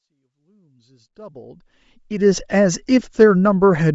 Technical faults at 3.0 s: Bluetooth LC3 compression

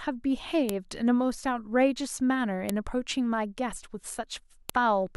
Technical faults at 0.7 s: file header played as audio

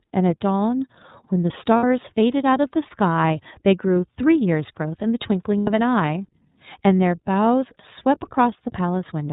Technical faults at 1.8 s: iLBC codec; lost iLBC frames

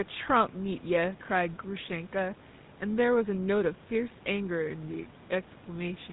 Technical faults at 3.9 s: GSM full-rate codec

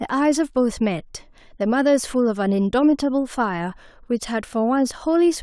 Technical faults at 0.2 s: none

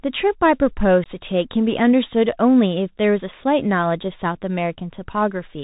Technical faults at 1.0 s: Bluetooth CVSD headset codec; unconcealed Bluetooth headset packet loss

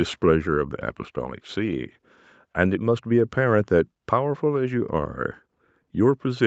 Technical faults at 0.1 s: none

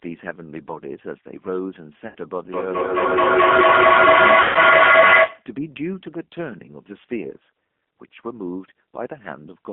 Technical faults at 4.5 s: G.729 codec; VoIP packet loss concealed by the speech codec

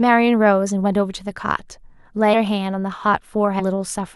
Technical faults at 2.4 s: compressed frames skipped

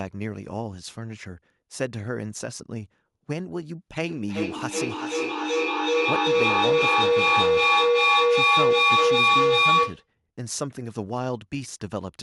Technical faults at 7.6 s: feedback echo between two devices

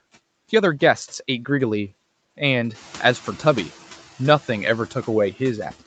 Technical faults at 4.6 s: noise suppressor artifacts

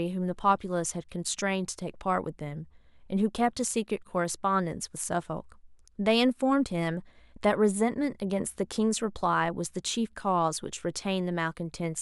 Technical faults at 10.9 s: none

